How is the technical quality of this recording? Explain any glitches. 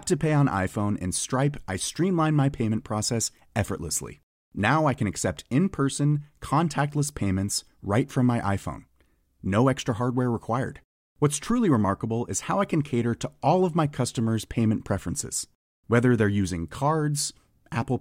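Nothing here sounds amiss, so there are no glitches to explain in this speech recording.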